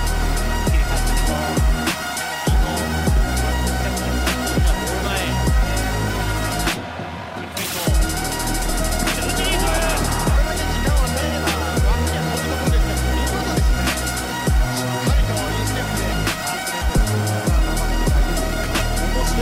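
At 8.63 to 8.80 s, 16.81 to 16.99 s and 18.63 to 18.82 s, the audio has frames out of order. In each spot, two neighbouring blocks of about 80 ms play in swapped order, which fits runs of four frames each. The sound turns briefly into a garbled flutter. No time is lost, and the timing stays steady afterwards.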